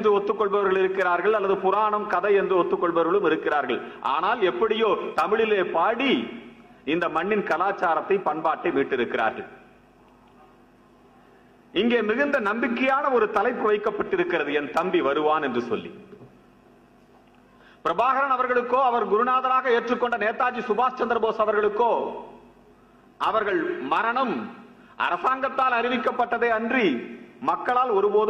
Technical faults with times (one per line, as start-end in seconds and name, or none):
none